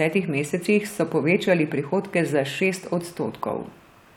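Speech recording with no technical faults found anywhere in the clip.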